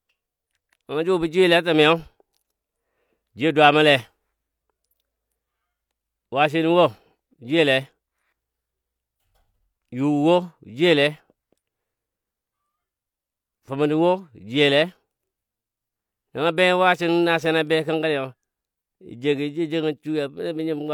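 No technical faults turn up anywhere in this speech, so there is nothing to describe in time order.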